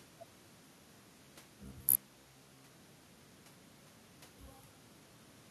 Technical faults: robotic sound from repeated short buffers

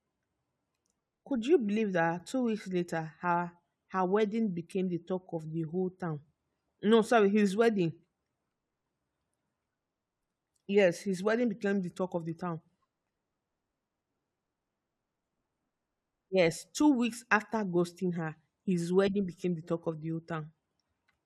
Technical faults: none

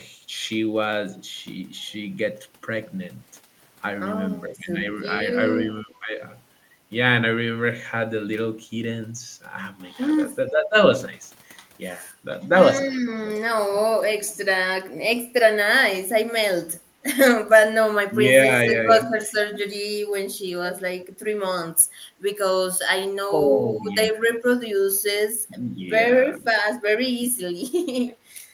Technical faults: speech suppressed in double talk; echo leak

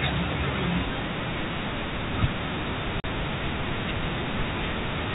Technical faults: packet loss filled with silence

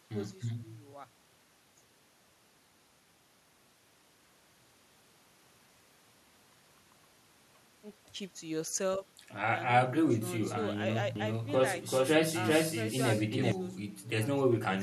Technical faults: doubled audio track

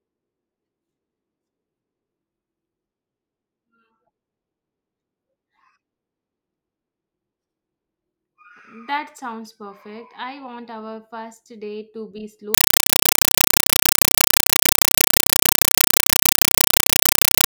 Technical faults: compressed stream played as audio

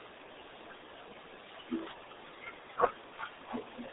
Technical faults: RealAudio 14.4 codec

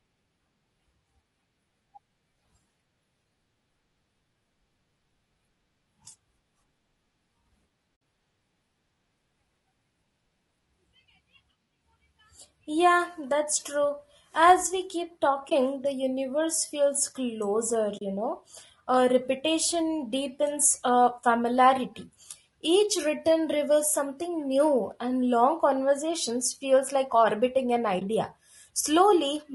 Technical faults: low-delay AAC compression; AAC frame loss with muting

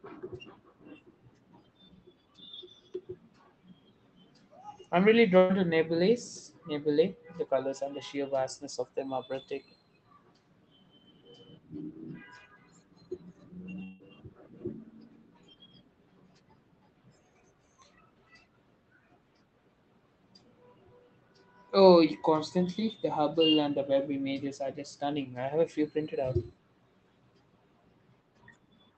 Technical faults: burst of packet loss; long network dropout

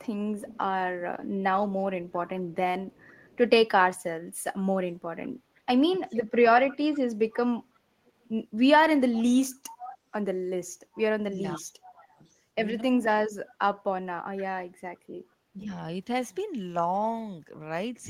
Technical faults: echo leak; speech suppressed in double talk

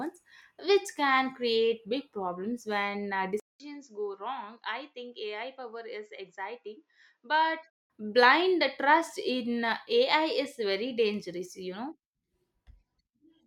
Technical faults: input switched to a poorer device

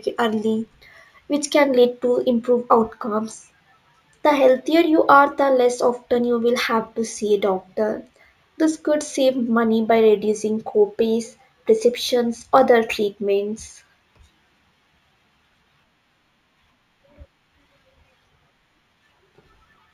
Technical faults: imaging from linear upsampling

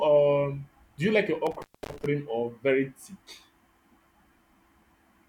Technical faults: intermittent contact

